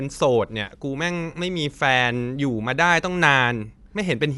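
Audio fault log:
Throughout, Dolby Digital compression: the speech sounds dull and rough, with fluttering noise around tones and nothing above 11.5 kHz. This fits likely AC-3 coding near 64 kbps, where bit-starved lines get dither noise. Spectrogram: hard 11.5 kHz ceiling, grainy speckle between harmonics.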